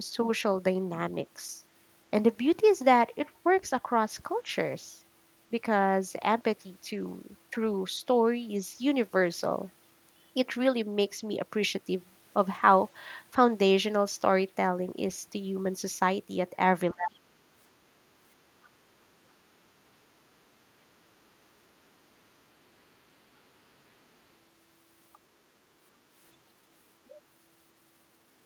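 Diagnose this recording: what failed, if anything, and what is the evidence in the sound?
The speech drops hard twice, first from 16.93 to 17.38 s, where it falls by something like 30 dB, then more briefly from 19.24 to 19.38 s with a shallower dip of around 20 dB. That points to call processing: speech suppressed in double talk is the likely cause. When both ends talk at once, the echo canceller can't tell the local voice from loudspeaker echo, so it ducks everything and the near talker gets gated along with it.

Right between those dips, from 18.63 to 18.69 s, a faint fragment of a second voice slips in at roughly 35 dB below the main speech, just a short scrap. It's the other side's voice leaking through, again most likely from the echo canceller. The far end plays out of the device's speaker, the mic picks it up, and the canceller leaves a small residue that gets passed along instead of being fully removed.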